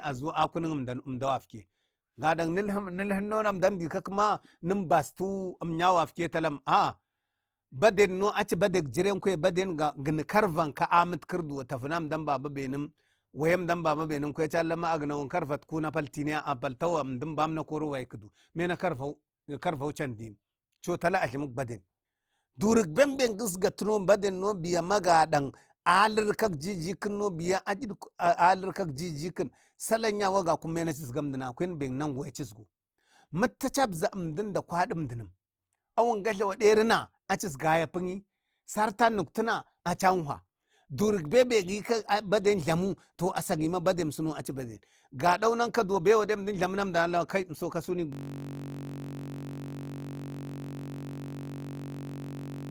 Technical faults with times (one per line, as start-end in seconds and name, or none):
0.00-52.71 Opus compression
48.12-52.71 system hang loop